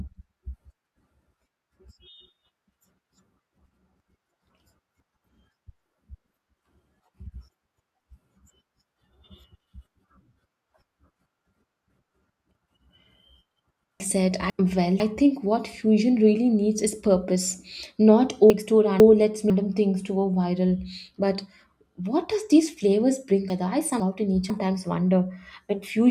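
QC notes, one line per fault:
4.0–5.0 s, 7.0–8.0 s, 14.0–15.0 s (just before "think what fusion really"), 18.5–19.5 s (just before "things to go viral"), 23.5–24.5 s (just after "does these flavors bring"): chunks out of order. Each time, a 500 ms chunk arrived one chunk late and plays after the chunk that should follow it. The two halves of that second are swapped. The speech is jumbled but nothing is missing, and there are hard joins at the start, middle and end.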